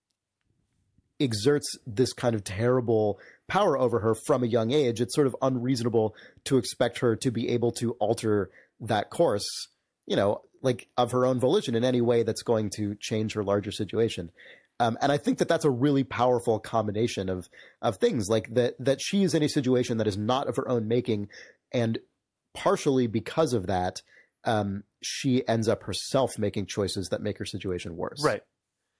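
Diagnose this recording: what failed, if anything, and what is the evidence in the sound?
Nothing seems to have failed here; the speech comes across steady and intact, with nothing in the sound that points to a problem at any stage of the chain.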